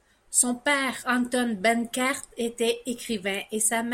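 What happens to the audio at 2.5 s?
Nothing goes wrong at 2.5 s: the speech carries on intact through that moment, with no dropout, click or distortion.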